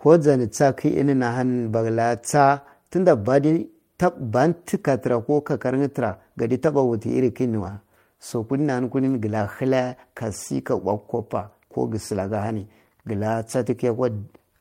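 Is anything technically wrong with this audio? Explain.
No, nothing stood out as technically wrong when listening to this speech recording.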